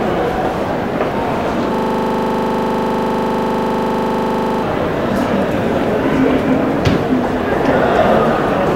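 From 1.75 to 4.63 s, a system hang loop occurs. The machine froze, replaying one 40 ms buffer about 72 times, a 25 Hz stutter.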